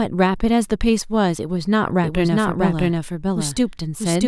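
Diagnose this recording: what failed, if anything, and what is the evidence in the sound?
A doubled audio track appears at 2.04 s and runs to the end. From there a second copy of the speech trails the first by roughly 0.7 s, at about the same level. The copy is full-band and dry, with no decay or room colour. It cuts in abruptly. The likely cause is at the driver or buffer stage: the signal was captured twice, once through a slower path, and both copies were mixed together out of step.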